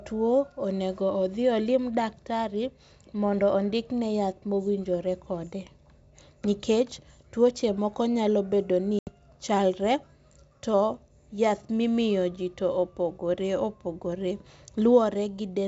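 Speech over a G.722 wideband link, with packet loss on an ADPCM call at 8.99 to 9.10 s: an 80 ms silent gap, roughly several packets, then slightly distorted speech as the decoder's predictor and step size fall out of step.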